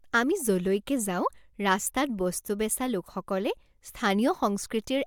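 No technical faults occur anywhere in this speech recording.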